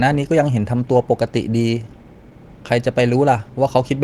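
No technical faults can be heard anywhere in the speech. The Opus voice compression runs in hybrid mode at about 20 kbps with the full band kept, and its coding leaves only light traces on the sound.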